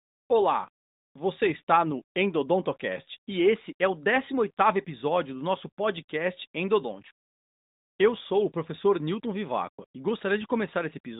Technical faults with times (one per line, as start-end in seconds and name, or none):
none